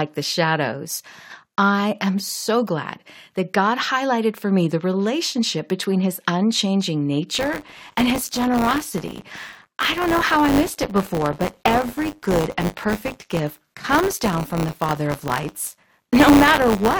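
At 7.34 s, right after "relationship between his unchanging", buffer tearing sets in and runs to the end of the clip. The writer and reader of the audio ring buffer have drifted and now cross inside each period. A small slice of every buffer, under a tenth, carries audio from one lap earlier, about 20 ms old. Hard joins sit on both sides of that slice. The result is a steady robotic buzz at 100 Hz, which fits a 10 ms period, heard only while speech is present.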